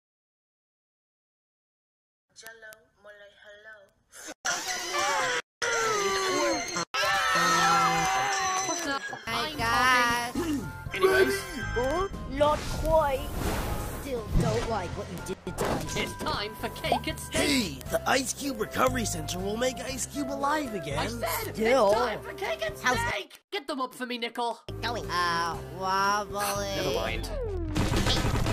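From 0.15 s to 28.52 s, word clock ticks sound roughly every 50 ms as sharp clicks of uneven strength: an unlocked receiver, about 400 ppm off, slips one sample each time. A spectrogram shows evenly spaced thin vertical lines, and the waveform shows brief spikes a few samples long.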